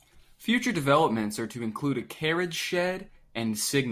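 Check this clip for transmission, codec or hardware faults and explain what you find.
No transmission, codec or hardware fault can be heard anywhere in this speech recording.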